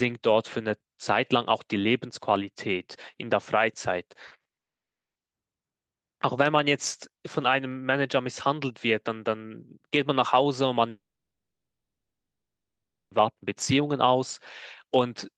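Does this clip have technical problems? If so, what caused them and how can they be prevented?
Yes. Repeated packet loss (robotic sound) runs from 4.27 to 4.59 s: four gaps up to 60 ms each are patched by stretching the last sound, leaving choppy, robotic speech with about half the span concealed.

A long network dropout follows from 4.59 to 5.17 s, and another from 10.89 to 13.22 s. In both, the sound goes silent, for 0.56 s and then about 2.1 s, likely because packets stopped arriving and that speech was never recovered.

To prevent this, use a more stable connection, a larger jitter buffer, or Opus in-band forward error correction.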